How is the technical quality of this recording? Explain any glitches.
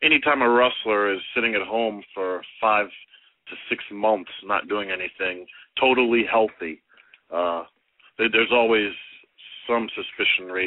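Nothing stood out on listening; I heard no glitches or technical problems anywhere in the recording.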